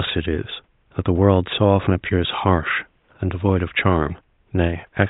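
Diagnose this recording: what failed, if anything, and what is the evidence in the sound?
Nothing in the recording points to a failure at any stage of the chain. The faint room noise behind the speech sits about 49 dB below it and belongs to the room the microphone was in, not to the system.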